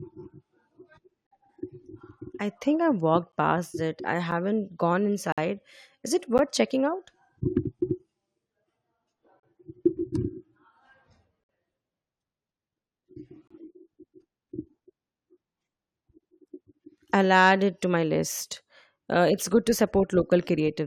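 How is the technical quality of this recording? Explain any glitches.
The speech is repeatedly broken by gaps between stream segments. Hard-edged dropouts occur at 1.27–1.31 s, 3.32 s (after "I think I walked"), 4.31 s, 5.32–5.38 s, 6.38 s, 9.40–9.43 s, 11.44–11.49 s and 13.48–13.51 s, lasting from about 8 to 54 ms. They fall roughly one second apart or at multiples of that, which fits 1-second segments whose timestamps leave small holes that the player pads with silence. Nothing is lost, but each hole is heard as an abrupt cut in the sound.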